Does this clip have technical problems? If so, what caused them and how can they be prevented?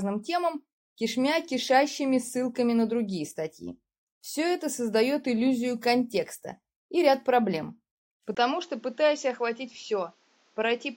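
Yes. At 8.35 s there's a brief gap, then the sound goes dull right to the end, with nothing above 7.6 kHz. It's also a little quieter, with some fresh background noise, so the input likely switched to a poorer device. Lock the recording input in your system settings so another mic or headset can't grab it mid-take.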